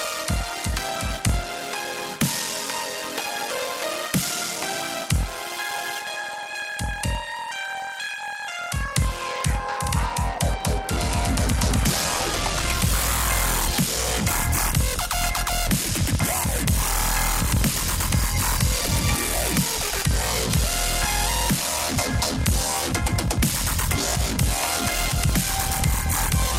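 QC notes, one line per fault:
Throughout: block size mismatch (padded). One stage writes blocks shorter than the next stage reads, fitting 1024 samples into a 1152-sample block, and zeros fill the remainder. Each gap produces a steady 41.7 Hz buzz, and the audio runs at 0.889 speed with pitch about unchanged.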